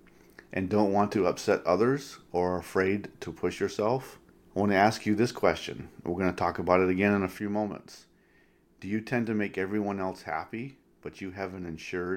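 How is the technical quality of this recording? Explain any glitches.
The recording has one clear glitch, a sudden gain jump at 7.39 s, just after "it again in a". A digital gain change was likely applied in a single step without a ramp, so the speech and background noise drop together by about 6 dB and stay quieter to the end.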